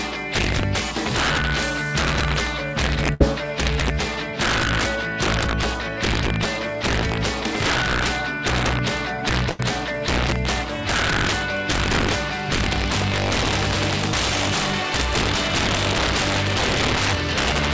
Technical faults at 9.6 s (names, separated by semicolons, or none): integer overflow; burst of packet loss